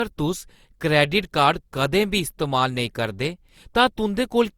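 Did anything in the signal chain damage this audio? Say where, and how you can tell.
Yes, at the codec stage, throughout the speech. The damage sounds like generation loss: a swirly, hollow, smeared texture with softened attacks, even though content reaches up to about 20.1 kHz. A single low-bitrate encode would have dulled the top end too. Full bandwidth with this much smearing points to repeated passes, likely through an Opus chain at around 64 kbit/s re-encoded about four times. Each pass quantises on a shifted frame grid, so the noise compounds.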